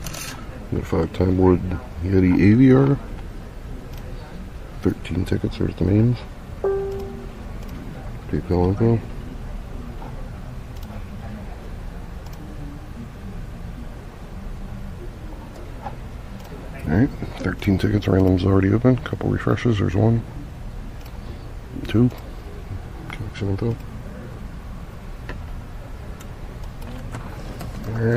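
From start to finish the audio carries audible MP3 compression damage. The treble stops at a fixed ceiling and the upper detail turns watery and swirly, because weak frequency components are dropped in some frames and kept in others. Sharp attacks come out smeared and bright sounds chirp metallically, a degree of damage that fits a low rate of around 64 kbps. Unlike a plain low-pass filter, the top end here shifts and flickers over time rather than sitting dull and steady. The likely cause is a lossy MP3 encode.

At 21.78 to 21.80 s come repeated frames. A single stretch of about 26 ms, the length of one MP3 frame, plays twice in a row, so the audio jumps back and runs over the same instant again with a brief stutter. This is what separates it from a dropout or a skip, since nothing is lost and 26 ms of duplicated material is added instead.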